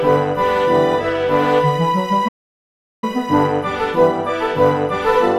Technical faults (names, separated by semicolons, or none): playback stall